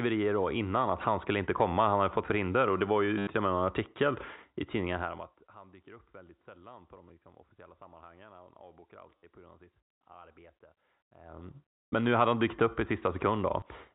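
At 3.18–3.27 s, between "förhinder och det var" and "till och med en", packet loss with last packet repeated fills a 90 ms gap by replaying the previous packet. The run buzzes near 100 Hz, which fits 10 ms packets, giving a brief robotic stutter.

From 4.94 to 5.46 s, zipper noise appears as the level drops by roughly 25 dB in unsmoothed steps, around a hundred per second. Each step clicks, so a fine ticking rides on the sound through the fade, on top of the band-limited G.711 telephone sound.

The same packet repetition returns as a single tick at 7.09 s, between "väldigt sällan på de" and "liksom officiella sammanhangen". It recurs as a 50 ms stutter at 9.18–9.23 s, just before "på grund av sitt", and as a 20 ms glitch at 13.60–13.62 s.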